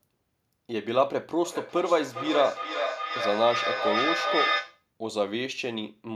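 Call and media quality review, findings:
Feedback echo between two devices, 1.44 to 4.87 s. Speech returns at a steady interval of roughly 0.4 s, peaking about 2 dB below the direct speech. Second device's loudspeaker output re-captured by this microphone; local echo canceller does not cover another device's playback.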